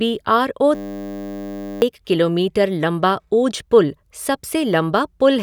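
From 0.75 to 1.82 s the speech gives way to a system hang loop: the system stalled while the audio hardware kept replaying one 10 ms buffer, roughly a hundred times, producing a steady 100 Hz buzz and losing about a second of speech.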